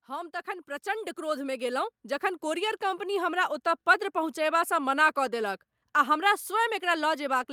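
Right from the start, at about 0.06 s, you can hear automatic gain rising. The AGC decided the input was too quiet and kept pushing its gain up until around 3.11 s, about 10 dB in total. Because it's the gain stage doing this, the speech and the background noise swell together over those three seconds, so it sounds like the whole room is slowly fading in rather than the talker getting louder.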